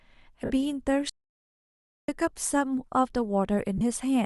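At 0.45 s the speech breaks up for 50 ms, to 0.51 s, with lost LE Audio frames. The gap fits five consecutive 10 ms frames going missing. The decoder covers it by repeating the last spectrum with scrambled signs, so the voice smears into a brief noisy, hissy blur. At 1.10 s the audio drops out to silence. Everything stops dead for about 0.99 s and returns at 2.08 s. The gap is silent with no room tone, which points to the input likely having been lost while recording continued. At 3.78 s a second, shorter loss of LE Audio frames lasts 30 ms, to 3.81 s, matching about three frames. It gives the same grainy concealment smear. The underlying Bluetooth LC3 compression, likely at 64 kbps, adds only a light breathy edge.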